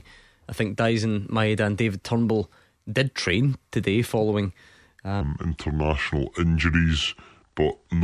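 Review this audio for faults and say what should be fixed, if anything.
From 5.21 s to the end at 8.04 s the speech drops into a wrong sample rate fault. It slows to 0.726 times normal speed and falls about 5.6 semitones, so it sounds low and dragging. That ratio fits 44.1 kHz audio being played back at 32 kHz without resampling. On a spectrogram the harmonics and formants slide down and spread out in time from 5.21 s onward. In the waveform the pitch periods lengthen by the same factor. To prevent this, tag each file with its true rate and resample explicitly whenever the output device's rate differs.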